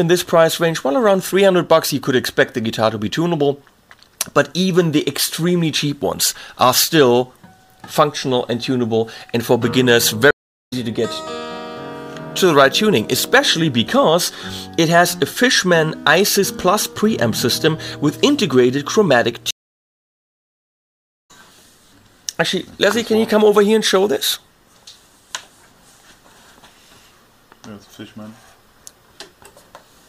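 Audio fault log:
10.31–10.73 s and 19.51–21.31 s, stream reconnect: the sound drops out, for about 0.4 s the first time and 1.7 s the second, and then picks up at a later point, skipping roughly 0.3 s and about 2 s of material. This is what happens when the connection breaks and the player reconnects: it opens a fresh decoder mid-stream and joins at the live position, so whatever passed during the outage is lost.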